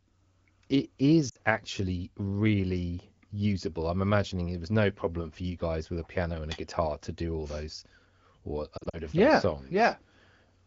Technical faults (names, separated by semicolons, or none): lost AMR speech frames